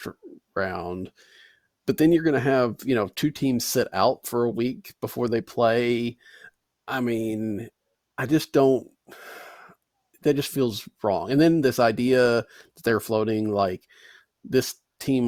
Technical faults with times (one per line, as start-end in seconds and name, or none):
none